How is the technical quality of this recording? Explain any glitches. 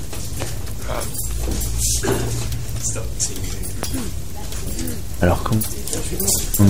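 The recording is marred by two loud pops. Loud pops occur at 0.42–0.44 s and 3.83–3.85 s. Each is likely a voltage spike from a plug, switch or static discharge entering the signal path. Each is a single sharp pop peaking roughly 15 dB above the surrounding sound, which continues underneath.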